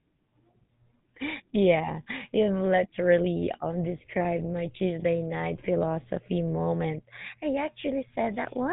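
Throughout the speech, GSM full-rate codec damage is plainly audible: a buzzy, gravelly roughness from pulse-driven excitation, with nothing above 3.8 kHz, which fits the 13 kbps GSM full-rate codec. That regular rasp separates it from simple band-limiting, which only dulls the sound.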